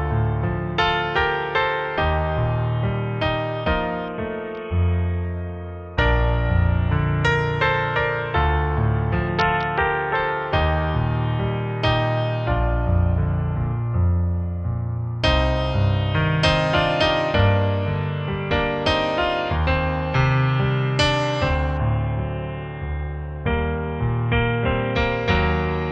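From 4.08 to 5.25 s, 9.29 to 10.15 s and 21.77 to 24.95 s, a Bluetooth SBC bit pool drop dulls the treble and adds gritty noise, consistent with a rate near 55 kbps. On a spectrogram the upper bands go blank and turn blocky. The waveform barely changes.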